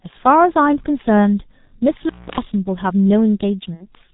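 Throughout the clip the speech has the narrow, muffled and hoarse quality of the G.723.1 codec, which fits a bitrate near 6 kbit/s. Nothing above 4 kHz survives and consonants smear together. Unlike a simple low-pass filter, the voice itself sounds rough because its model updates only every 30 ms.

From 2.04 to 2.40 s an intermittent contact opens for about 286 ms. The sound cuts out with crackle at both edges, leaving faint hiss in the gap. The clicks and the residual line noise set it apart from a clean digital dropout.

At 3.74 to 3.87 s, VoIP packet loss concealed by the speech codec stretches the last sound into a fading extrapolation for about 60 ms, consistent with two lost 30 ms frames. It differs from the contact fault because there is no silence or crackle, and the voice stays weak and distorted briefly after the stream resumes.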